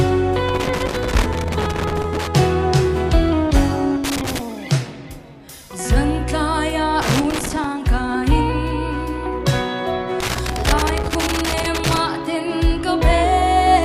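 A loose connector crackle breaks through the sound four times: from 0.49 to 2.27 s, 4.04 to 4.39 s, 7.02 to 7.64 s, and 10.20 to 12.00 s. Each burst is that irregular scratchy chatter you get when a worn or dirty contact shifts and keeps making and breaking, chopping the signal and popping wherever there's DC on the line. The longer first and last stretches each run for nearly two seconds.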